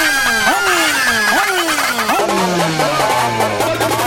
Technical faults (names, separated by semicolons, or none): audio read two samples at a time (double speed)